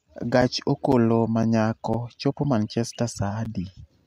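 Brief hard-edged dropouts of about 6.5 ms cut the speech at 0.41, 0.92, 1.43, 1.93, 2.44, 2.95 and 3.45 s, a gap between chunks: silence inserted at each 0.5 s chunk join.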